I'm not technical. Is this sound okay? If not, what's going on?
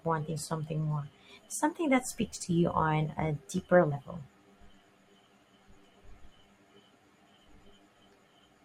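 No. At about 3.91 s the speech briefly jumps ahead: roughly two 20 ms chunks of compressed audio, around 40 ms, were skipped. That's compressed frames skipped. Unlike a dropout, there's no silent gap; the audio simply jumps ahead.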